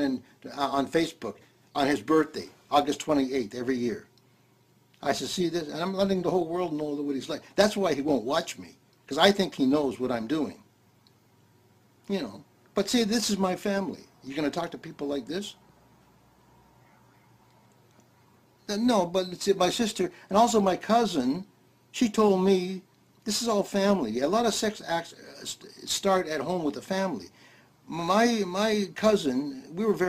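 Throughout, a crude rate conversion, consistent with dropping samples from 48 kHz to 44.1 kHz without filtering, adds inharmonic fizz roughly 25 dB below the sound, following loud, bright passages.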